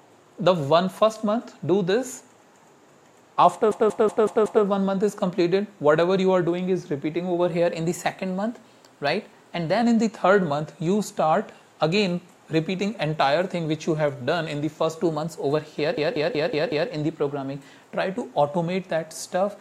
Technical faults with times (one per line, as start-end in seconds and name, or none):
3.72-4.64 system hang loop
7.50-9.82 drift correction step
15.04-17.93 drift correction step
15.98-16.90 system hang loop